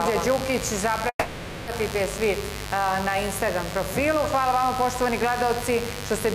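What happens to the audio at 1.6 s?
At 1.6 s the sound has stalled in a call audio freeze lasting from 1.09 to 1.69 s. The last sound is drawn out and fades, filling about 580 ms with 60 ms of silence, before resuming where it stopped, with nothing lost. The likely cause is delayed packets draining the jitter buffer, so the receiver improvised until the packets arrived.

Under this, a steady, raspy mains buzz sits about 10 dB below the signal. Switching spikes at twice each 50 Hz cycle have leaked in, spreading harmonics well into the kilohertz range.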